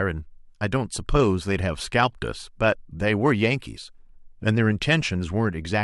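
No technical faults can be heard anywhere in the speech recording. There is nothing in it to place at a time or trace to a cause.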